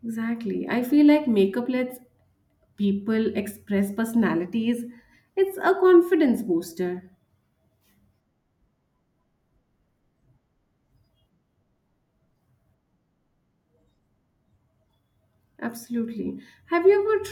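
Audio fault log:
No audible faults detected.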